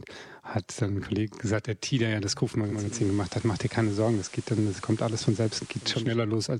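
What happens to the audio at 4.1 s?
Digital radio blending to analogue runs from 2.60 to 6.18 s, after "der ja das": the receiver lost its digital stream and cross-faded over 375 ms to the station's FM signal. At 4.1 s the speech carries hiss roughly 20 dB down and a level shift of about 2 dB.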